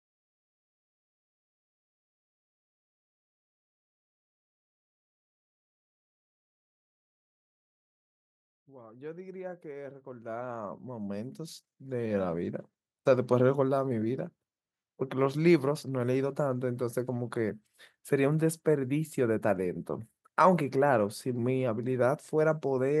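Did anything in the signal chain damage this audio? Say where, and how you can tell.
Yes. Automatic gain rising in call processing: from 8.66 to 12.58 s the AGC ramps speech and noise floor up together about 19 dB, widening the waveform envelope steadily.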